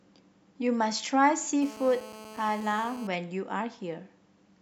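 From 1.62 s to 3.07 s a GSM phone buzz sits under the speech: a hard, raspy tone at about 217 Hz, rich in harmonics, about 17 dB below the signal. A nearby 2G phone's bursts are being rectified by the audio circuit, and the buzz stays steady, consistent with a call.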